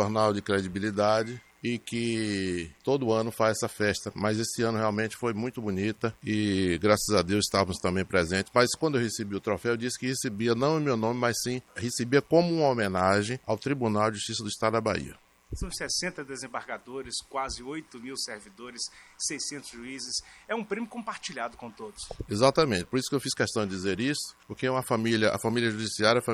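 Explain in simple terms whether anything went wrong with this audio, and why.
A steady, raspy mains buzz runs quietly under the sound from start to finish. It comes from the 60 Hz power supply. Sharp electrical spikes, twice in each power cycle, leaked into the recording. They add a rough, high-reaching hum that never stops.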